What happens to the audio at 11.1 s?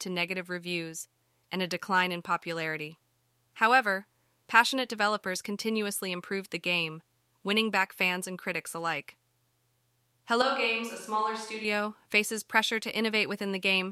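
At 11.1 s the speech sits inside a switch to a distant microphone, running from 10.42 to 11.65 s, just before "faces pressure". The close microphone's feed likely dropped out, leaving a farther pickup. The sound turns hollow and roomy, with thinner bass, a level roughly 5 dB lower and room noise around 35 dB below the speech. A waveform shows a shrunken envelope with abrupt steps at both edges. A spectrogram shows weaker lows, a raised noise floor and reverberant smearing.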